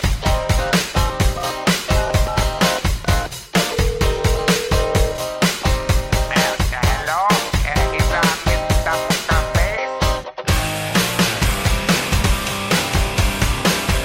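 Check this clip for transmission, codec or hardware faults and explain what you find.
Two brief glitches from damaged data in a compressed stream occur at 9.09 s and 12.20 s. Corrupted frames make the decoder lose sync and search for the next frame header, producing a short chirp, click or hole.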